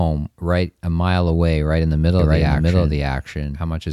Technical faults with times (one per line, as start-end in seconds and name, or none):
2.19-3.93 doubled audio track